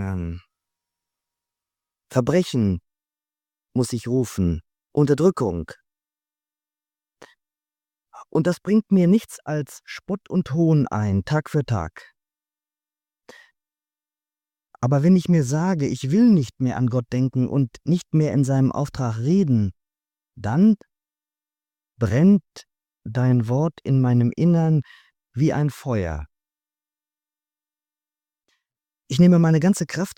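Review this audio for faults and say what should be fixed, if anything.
Nothing stood out on listening, so there is nothing here that needs fixing.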